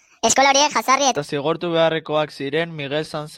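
From the start of the clip to 1.17 s, the playback clock runs too fast for the material, most likely because an editor or player is using the wrong sample rate for this stretch. The result is a section at the wrong speed: the speech plays 1.53 times faster than recorded, and its pitch rises by about seven semitones along with the tempo, so the voice sounds high, thin and hurried. At 1.17 s, speed and pitch drop back together.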